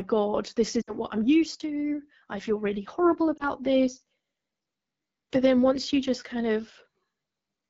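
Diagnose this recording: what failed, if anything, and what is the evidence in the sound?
Codec stage: the whole speech clip carries the rough, raspy texture of the AMR wideband (HD Voice) codec, which fits its 8.85 kbit/s mode. At that rate the pulse-excited vocal tract model lacks bits, and the band from 6.4 to 7 kHz is filled with shaped noise.

Network stage: lost AMR speech frames at 0.81 to 0.94 s, before "what I'm used to", and at 3.37 s, after "I feel really horrible". The decoder repeats earlier pitch and tract settings at falling gain, smearing and fading about 60 ms, then a 20 ms dip.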